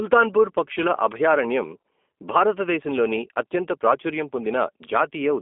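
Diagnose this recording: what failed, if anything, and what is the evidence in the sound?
G.729 codec damage runs throughout the speech, at the codec stage. Nothing reaches above about 3.6 kHz, and the band sits between roughly 250 Hz and 3.5 kHz, a telephone line's shape. The speech sounds plainly rough and synthetic, which points to an 8 kbit/s G.729A-style coder. That coder discards the waveform and rebuilds each 10 ms frame from a vocal tract filter, a pitch predictor and a few pulses, so fine detail comes back as buzzy approximation.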